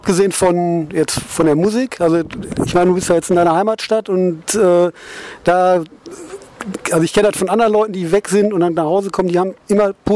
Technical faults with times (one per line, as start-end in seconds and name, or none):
none